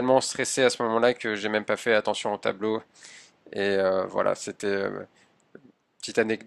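No audible technical faults.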